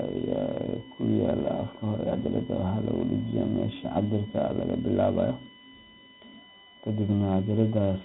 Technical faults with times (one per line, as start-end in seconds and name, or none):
0.00-8.04 USB whine
0.00-8.04 4-bit ADPCM compression